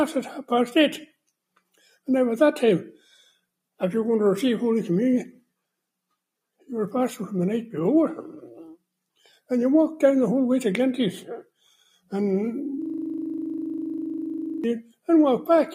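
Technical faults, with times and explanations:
1.74–2.07 s, 2.97–3.32 s, 11.64–12.12 s and 14.83–15.08 s: sound cut by the noise suppressor. In each short stretch, a fraction of a second long, the suppressor mistook real sound for noise and pulled it down, by about 17, 8, 12 and 20 dB. Unlike a dropout, the sound sinks rather than vanishing, and sustained or decaying parts lose the most.
12.82–14.64 s: system hang loop. The system froze while the audio hardware kept replaying one 40 ms stretch of its buffer, 45 times, giving a rapid 25 Hz rattling stutter. Every repeat is identical, which sets it apart from a codec glitch or packet-loss concealment.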